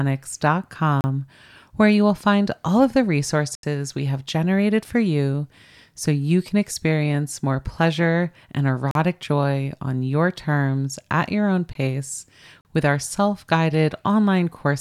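At 1.01 to 1.04 s, 3.55 to 3.63 s after "find all of the", 8.91 to 8.95 s after "experience more pleasure and", 11.73 s after "terms at your own", and 12.61 to 12.65 s, the speech drops into a block of digital silence. Samples get zeroed, probably because the output buffer wasn't filled in time. Each hole, lasting 18 to 80 ms, starts and stops abruptly.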